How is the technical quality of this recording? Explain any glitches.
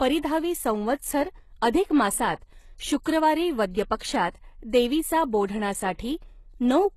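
The recording has one plainly audible fault, present for the whole clip: the speech sounds like HE-AAC compression at a low bitrate, likely around 16 kbps. Nothing sits above 12.3 kHz, and the treble is resynthesised rather than coded. Spectral band replication copies lower bands upward and shapes them with a coarse envelope, so the upper harmonics no longer line up with the coded band below. Sibilants come out gritty, metallic and lispy.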